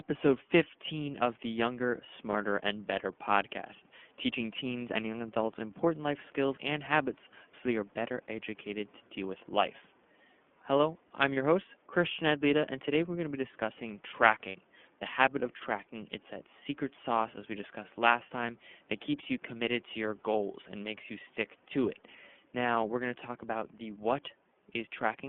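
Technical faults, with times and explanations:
Throughout, iLBC codec: the speech passes through a narrowband VoIP coder that squeezes each 30 ms frame independently. Only about 200 Hz to 3.4 kHz survives, so the sound is muffled and plainly rough and synthetic, which fits iLBC's 13.33 kbps mode. Quiet room noise sits about 38 dB below the speech.
2.30–2.35, 11.34–11.37 and 14.48–14.56, lost iLBC frames: packets went missing, one 30 ms frame in each of the first two and two frames (60 ms) in the third. The decoder covers each gap by repeating the last pitch cycle blended with noise, heard as a brief held, buzzy vowel before clean speech resumes immediately.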